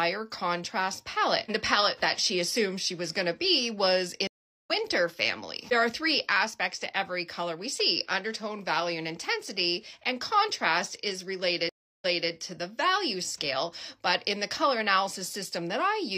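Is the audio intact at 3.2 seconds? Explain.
Yes, at 3.2 seconds the audio plays through cleanly, with no dropout, click, distortion or other fault to be heard.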